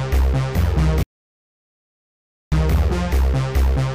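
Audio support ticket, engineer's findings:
Audio dropout to silence, 1.03–2.52 s, roughly 1.49 s lost. Sound cuts off mid-flow and resumes abruptly. Gap is silent with no room tone, so the content in that span is unrecoverable. Probable component: input path upstream of the recorder. Likely cause is a momentary device disconnect, link failure or inadvertent mute, with the encoder writing silence until the signal returned.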